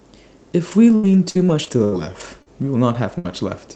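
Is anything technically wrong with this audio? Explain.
Yes, the call path damages it in a few places.

From 0.71 to 2.48 s there's repeated packet loss, giving a robotic, choppy sound. Five gaps, the longest 78 ms, get patched by stretching the previous sound, about 15% of that span, and roughly 280 ms of the real audio never arrives.

At 3.18 to 3.26 s a burst of packet loss hits. The receiver holds the last sound for about 64 ms and fades it, so you get a smeared buzz or hiss, then the audio jumps ahead past about 60 ms that simply went missing.

A lost packet is rebuilt from error correction at 2.94 s, 3.24 s and 3.28 s, each a 20 ms frame. The following packet carried a low-bitrate backup copy, so nothing drops out, but those moments sound rougher and noisier. The Opus link, which sounds like about 24 kbps with the band topping out around 8 kHz, adds its own coding haze throughout.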